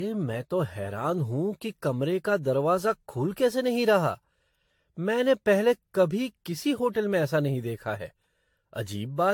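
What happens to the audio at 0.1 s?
At 0.1 s the speech carries generation loss, present through the whole clip. It sounds swirly, smeared and hollow, with blurred attacks and nothing above 19.1 kHz. The likely cause is repeated lossy re-encoding, around seven passes, each adding fresh quantisation noise and spectral holes.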